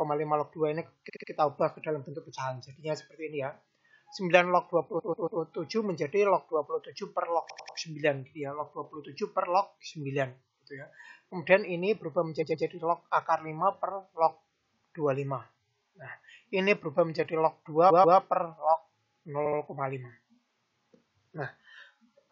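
Repeated frames: duplicated compressed frame runs replay 70–140 ms blocks two or three extra times at 1.08, 4.98, 7.49, 12.41, 17.89 and 19.45 s.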